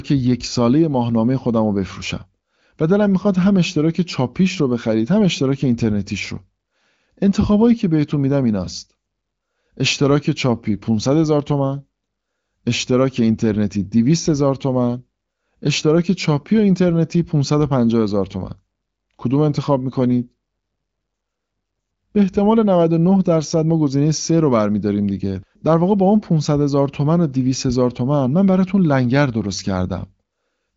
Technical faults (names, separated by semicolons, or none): none